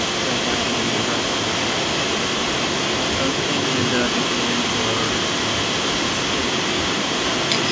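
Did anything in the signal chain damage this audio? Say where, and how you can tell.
Yes, an echo leak in call processing. Throughout, 0 to 7.7 s, the speech repeats 191 ms later at similar loudness, likely from a far-end canceller missing its loudspeaker pickup.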